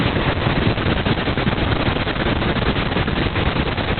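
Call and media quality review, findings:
Opus voice compression, throughout. Muffled, hoarse, slightly robotic speech; nothing above 4.3 kHz. Narrowband SILK coding with coarse excitation, which fits a bitrate near 6 kbps.

GSM signalling bursts, 1.59 to 3.73 s. Galloping dit-dit-dit of short 217 Hz buzzes, roughly 30 dB under the speech. A nearby 2G phone's radio bursts are being rectified in the audio circuit.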